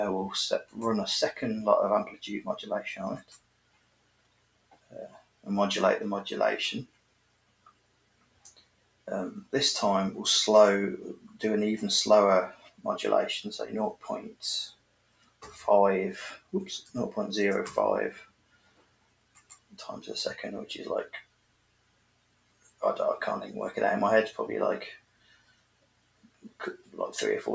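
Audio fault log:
Throughout: noise suppressor applied to music or sounds. A speech-oriented suppressor treats sustained tones, ambience and decays as noise, swinging gain by around 20 dB, so the sound pumps and thins while transients pass; the call path's band limit leaves nothing above 8 kHz.
3.2–5.46 s, 6.85–9.53 s, 11.21–11.39 s, 12.53–12.84 s, 13.94–16.94 s, 18.16–19.77 s, 21.22–22.82 s, 24.97–26.95 s: sound cut by the noise suppressor. Held or fading material is pulled down by about 17 dB at most (about 9 dB at 11.21 s, about 16 dB at 12.53 s), with decays truncated over stretches of up to roughly two seconds.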